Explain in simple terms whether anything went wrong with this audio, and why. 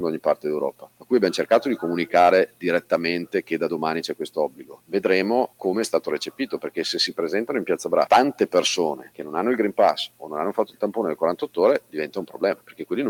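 Noise suppressor applied to music or sounds, throughout: a filter built for speech treats steady, lingering sound as background noise, so the level keeps dipping and swelling.

Sound cut by the noise suppressor, at 0.72–1.11, 2.47–2.63, 4.49–4.93, 9.03–9.19, 10.09–10.25 and 12.56–12.85 seconds: here it turned the sound down especially hard, so it sinks noticeably before coming back.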